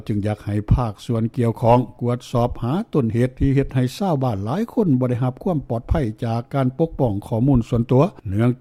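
No technical faults can be heard anywhere in the audio.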